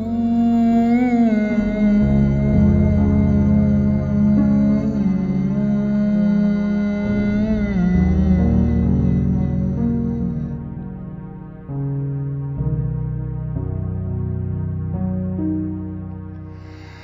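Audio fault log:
throughout: stereo read as mono, with interleaved left and right samples played as one channel, so everything runs at 0.5x speed, 12 semitones low, unlike plain resampling, which leaves no faint mirrored image in the upper spectrum.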